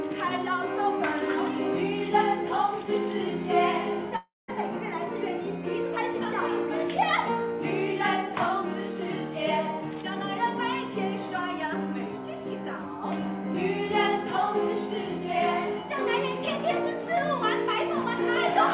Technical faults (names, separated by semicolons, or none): long network dropout